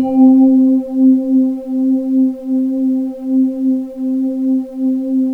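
No technical faults are audible.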